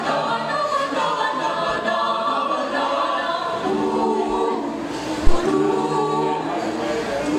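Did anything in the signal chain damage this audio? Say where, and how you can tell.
Yes, there's a phantom power thump on the analogue input side, before the converter. At 5.27 s a deep thud hits, peaking around -2 dBFS, then dies away with a decay of roughly 27 ms and is gone by 5.39 s. That's the classic signature of the supply being switched on a live channel: the DC step leaks through the coupling capacitors as one low-frequency pulse.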